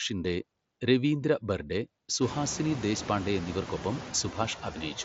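From the start to the end of the speech there are noise suppressor artifacts: the suppressor pulls what it judges to be steady noise down by about 20 dB, frame by frame. So the background drops away in the gaps and comes back up under the talking. The room noise climbs by about 21 dB around two seconds in, settling only about 12 dB below the speech. That room noise itself is just the recording space, not a system fault, and the headset link sounds like mSBC, with nothing above about 7.7 kHz.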